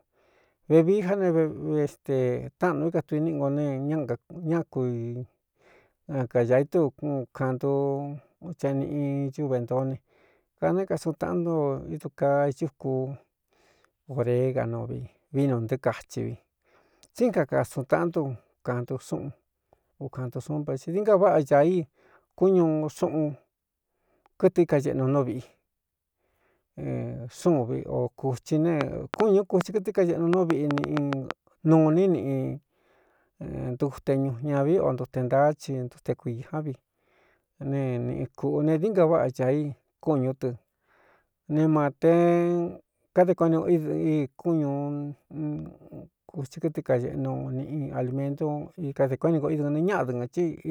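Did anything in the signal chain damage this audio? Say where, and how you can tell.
Yes. A train of clicks runs from 28.81 to 31.32 s, likely interference in the analogue wiring. About ten same-shaped pops arrive unevenly at 4.4 per second, roughly 20 dB above the speech. They sit on top of the sound rather than cutting gaps in it as dropouts would.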